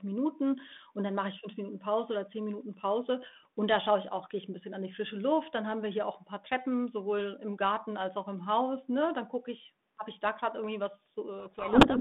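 Speech over a G.726 ADPCM link, band-limited to roughly 150 Hz to 3.6 kHz with light coding noise consistent with 32 kbit/s. From 11.4 s to the end, a codec payload misread buries the speech in harsh distortion: the receiver unpacks each G.726 code word with its bits in the wrong order, so the decoder's predictions are driven by scrambled differences.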